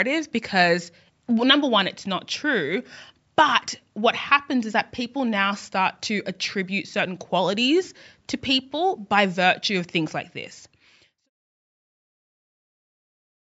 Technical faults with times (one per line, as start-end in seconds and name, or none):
none